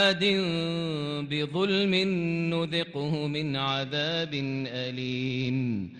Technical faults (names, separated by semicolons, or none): Bluetooth SBC bit pool drop